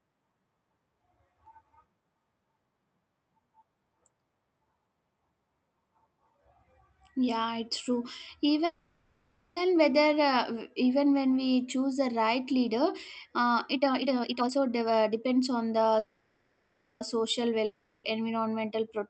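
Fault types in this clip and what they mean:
Call audio freeze: At 8.65 to 9.58 s and again at 15.99 to 17.03 s the speech stalls. The last sound is stretched into a fading buzz or hiss for about 0.9 s and then about 1.0 s, without dropping to full silence. The speech then picks up exactly where it stopped, so nothing is lost. Each pause pushes the rest of the audio later. The likely cause is delayed packets leaving the jitter buffer empty.
Jitter buffer speed-up: From 13.75 to 15.94 s, just after "the right leader uh", the speech runs at about 141% of normal speed while the pitch stays the same. It sounds rushed. The receiver is trimming many short slices, each a pitch period or a few long, to shed built-up delay. About a second of audio is removed across this stretch, which pulls the playback back toward its target delay.
Long network dropout: At 17.65 to 18.06 s the incoming audio stops and does not return in full. 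For about 0.39 s the last sound is carried on as a fading buzz or hiss rather than silence. The speech then resumes further along, with roughly 0.4 s of it gone for good. This fits a stretch where packets likely never arrived, so the receiver had nothing to play and could only fill the gap.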